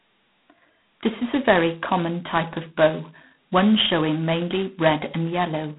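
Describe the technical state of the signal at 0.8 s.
At 0.8 s the speech carries G.726 ADPCM damage, present throughout. Coarse 2-bit prediction errors add a harsh, rasping hiss tracking the voice, consistent with 16 kbit/s. Nothing passes above 3.8 kHz.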